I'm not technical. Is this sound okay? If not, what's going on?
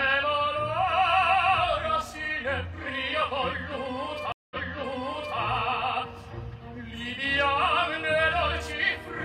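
No. At about 4.32 s the audio cuts out for roughly 0.19 s, then picks up again by replaying a stretch you have just heard, jumping back by about 0.88 s. The disturbance runs to about 5.39 s. This is a stream reconnect: the connection dropped, the player went quiet, reconnected and started decoding afresh in mid-stream. The server resent a short burst from slightly earlier, so a bit of the sound plays twice.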